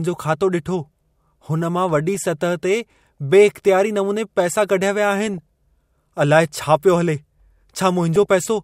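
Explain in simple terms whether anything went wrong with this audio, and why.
Weak digital radio reception let bit errors slip past error correction, causing DAB burbling: brief blips of noise over the speech at 2.15–2.28, 5.27–5.38 and 8.16–8.27 seconds.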